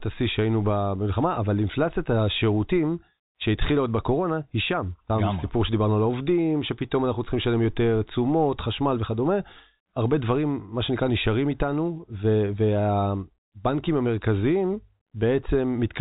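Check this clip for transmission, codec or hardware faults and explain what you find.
I find no transmission, codec or hardware faults in this clip.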